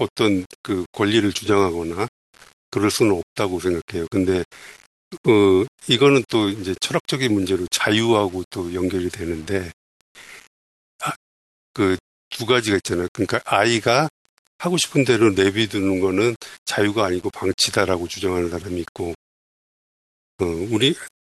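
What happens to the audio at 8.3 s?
At 8.3 s the speech carries the same grainy distortion heard throughout: likely low bit depth without dither, around 7 bits rounded, with error about 30 dB down. Unlike steady hiss, the grit tracks the voice and quiet moments sputter or drop to silence.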